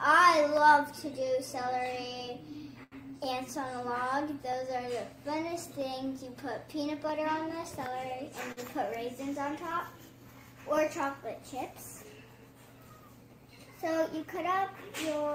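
From 0.57 s to 14.81 s, clicks every 1.28 s are clock drift buffer slips, likely a clock mismatch, seen as thin vertical spectrogram lines. Short stalls from a late packet at 2.83 s and 8.52 s hold the sound for 83 ms and 49 ms, appearing as flat smeared bands.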